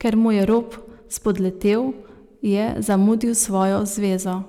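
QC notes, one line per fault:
0.07–0.58 s, 1.27–1.74 s, 2.90–3.64 s: hard clipping. Speech peaks overdrive the stage by about 3, 2 and 4 dB, so crests are sliced flat, giving crackly fuzz. The waveform shows squared-off tops; the spectrogram shows bright, smeared harmonics reaching high frequencies.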